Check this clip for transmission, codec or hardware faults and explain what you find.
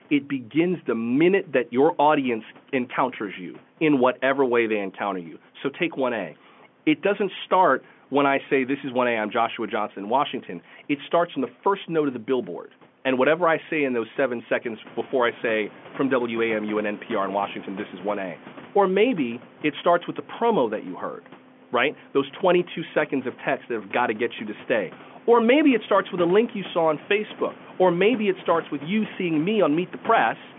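No transmission, codec or hardware faults turn up in this clip.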